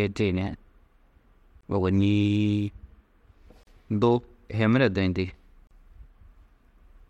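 Gaps at joins of encoded pieces appear at 1.61, 3.63 and 5.67 s, two seconds apart, each a 27 to 38 ms gap in the running speech. Separately encoded segments were joined with their encoder delay and end padding left in, so the speech stops briefly and resumes where it paused.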